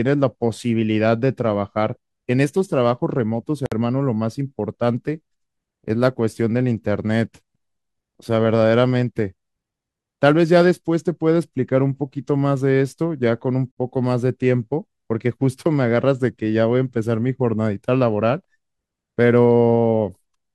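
At 3.66 s and again at 13.72 s the speech halts for about 57 ms and 54 ms, a gap at a join of encoded pieces. Each 10-second piece was encoded separately, and its start-up delay and padded final frame were left in. Unlike a packet dropout, nothing is lost: the speech resumes exactly where it stopped. The gaps recur at a steady 10-second spacing, and their abrupt edges are smeared by the codec.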